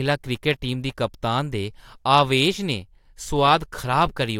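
No technical faults can be heard anywhere in this recording.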